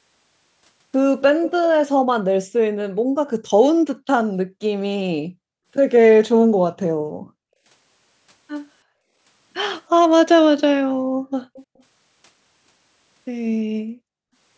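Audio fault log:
1.42–1.52 s and 11.56–11.83 s, echo leak: a faint delayed copy of the speech, lagging about 330 ms in the first instance and about 360 ms in the second, sitting roughly 15 dB and then 25 dB below the direct voice. Likely cause: residual loudspeaker pickup at the far end that the echo canceller did not fully remove.
6.81–6.92 s, 11.10–11.21 s and 14.21–14.32 s, background gated by the echo canceller: the room sound drops by up to about 40 dB for roughly a tenth of a second each time, then returns. The canceller clamped the microphone hard while the loudspeaker was active, then released it.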